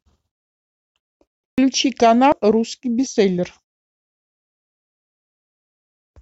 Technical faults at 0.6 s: none

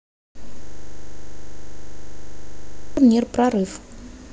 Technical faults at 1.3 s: system hang loop

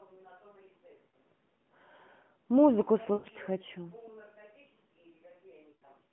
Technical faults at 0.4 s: none

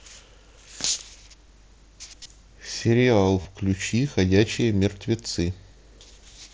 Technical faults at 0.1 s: none

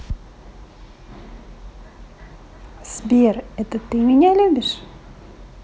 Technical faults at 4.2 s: none

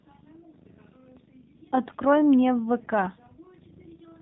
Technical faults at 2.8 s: AMR narrowband mobile codec

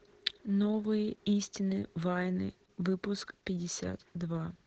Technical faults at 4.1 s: Opus voice compression

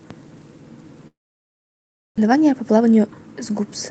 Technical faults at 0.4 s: none

